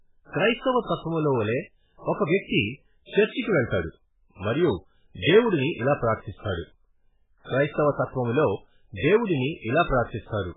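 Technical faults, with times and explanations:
Throughout, MP3 compression: the speech was likely passed through an MP3 encoder with far too few bits, which fits a rate near 8 kbps. Short of bits, the encoder removes everything above 3.8 kHz and zeroes weaker frequency lines, so they flicker on and off from frame to frame. The damage is heavy. The audio is dull and band-limited, with a watery, swirling texture, metallic chirps on s sounds, and smeared attacks.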